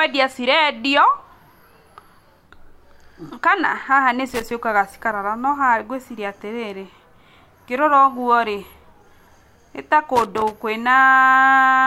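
At 4.28 to 4.51 s and again at 10.16 to 10.51 s, the speech breaks into loose connector crackle, a worn contact rapidly making and breaking so the signal chops. The scratching is irregular in spacing and level, unlike the evenly timed clicks of buffer dropouts.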